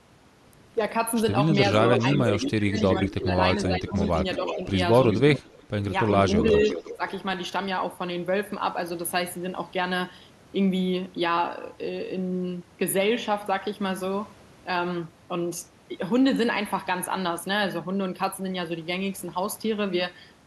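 The clip is speech with two recurring call faults. An echo leak runs from 1.97 to 3.14 s, 3.66 to 4.74 s, 5.11 to 5.6 s and 6.13 to 7.1 s. A delayed copy of the voice trails by 360 to 368 ms. It sits about 5 dB below the speech at first, then about 10 dB below. The likely cause is a far-end echo canceller failing to remove loudspeaker pickup. Speech suppressed in double talk hits 1.78 to 3.32 s, 3.68 to 3.98 s and 6.41 to 7.01 s. The voice dips in pieces, by up to about 15 dB early, then about 10 dB and about 5 dB. This is likely an echo canceller turning down both talkers while they overlap.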